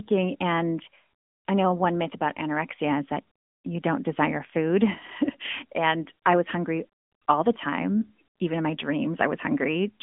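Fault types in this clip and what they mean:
AMR narrowband mobile codec: the speech has been through a 2G/3G-style phone codec, so it's band-limited to roughly 200 Hz to 3.5 kHz, and nothing above 3.7 kHz survives. The codec rebuilds the voice from a vocal-tract model excited by a few pulses per short subframe, and here that damage is plainly audible as a buzzy, synthetic edge. The amount of artefacting fits a fairly high-rate mode of around 10.2 kbps.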